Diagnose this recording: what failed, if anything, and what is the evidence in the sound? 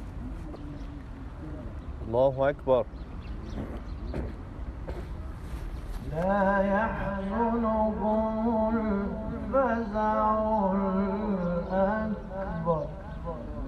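The compressed stream was corrupted at the codec stage: damaged data in a compressed stream briefly reached the decoder. Between 0.53 and 0.56 s, a short burst of roughly 30 ms sounds like a chirp or blip that does not belong to the surrounding audio. Bytes in that part of the file or stream were lost, zeroed or overwritten, so the decoder misread those frames and lost sync until it found the next valid frame header.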